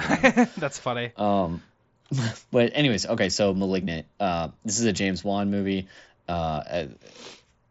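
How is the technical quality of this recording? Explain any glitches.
No glitches to report; nothing goes wrong here.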